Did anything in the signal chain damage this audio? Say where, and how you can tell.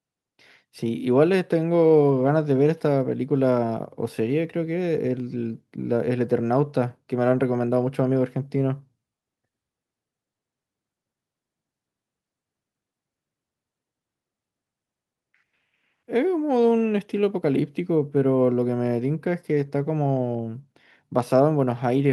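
No, nothing in the signal chain damaged this audio.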